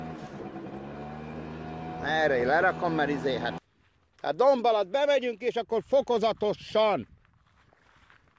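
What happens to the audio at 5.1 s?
Nothing goes wrong at 5.1 s; the audio plays through that moment intact, with no dropout, click, glitch or other fault.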